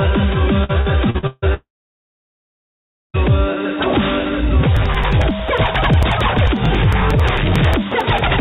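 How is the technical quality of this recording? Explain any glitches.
The quality is poor, with three separate network and driver faults, all heard through a narrowband call path whose content stops at 4 kHz, which fits a G.711-type telephone codec.

Repeated packet loss (robotic sound) runs from 0.64 to 1.45 s. Five gaps, the longest 155 ms, were patched by repeating the last audio, so about 42% of that stretch is synthetic. It sounds choppy. A spectrogram shows smeared, frozen harmonic blocks between normal frames.

A long network dropout runs from 1.54 to 3.17 s, likely caused by a network outage. About 1.6 s of audio never arrived. A brief fading buzz or hiss continues the last sound, then near-silence follows. The waveform shows a short decaying tail and then a flat line until the sound resumes.

Periodic USB or driver dropouts run from 4.77 to 8.27 s. Every 0.09 s, roughly 10 ms of audio is skipped outright, around forty times. 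Where there is signal, the skips are heard as regular ticks. A spectrogram shows evenly spaced thin vertical broadband lines, and the waveform shows matching discontinuities.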